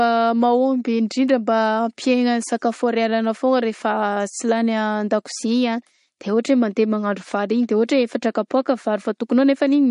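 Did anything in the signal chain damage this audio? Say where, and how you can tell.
Yes. The damage is at the codec stage, and it runs through the whole speech clip: nothing survives above 10.6 kHz, and the sibilants carry a watery, swirling texture with metallic chirps. This is likely MP3 compression at a low bitrate, which fits roughly 40 kbps. Starved of bits, the encoder cuts the treble and zeroes weak spectral lines that flicker between frames. A plain low-pass filter would dull the top end cleanly, without the swirling artefacts.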